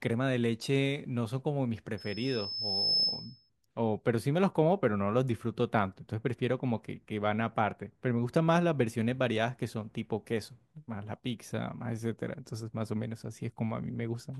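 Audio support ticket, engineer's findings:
Loudspeaker feedback squeal, 1.97 to 3.50 s. Single tone at 5.2 kHz, swelling over about a second. Peaks roughly 5 dB above the speech. Probable component: open mic feeding a nearby loudspeaker. Mechanism: loop gain above unity at 5.2 kHz, so that frequency regenerates on each pass. Squeal stops at 3.50 s.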